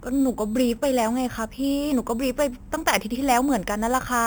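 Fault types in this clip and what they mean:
Imaging from sample-and-hold upsampling: a bright, metallic fizz rides on the speech throughout and swells and fades with its loudness. Its lowest band sits between 4 and 8 kHz, about 16 dB below the speech, and moves opposite to its pitch. That band edge fits an original 8 kHz rate raised by repeating each sample without a smoothing filter, which leaves mirror copies of the spectrum around every multiple of that rate.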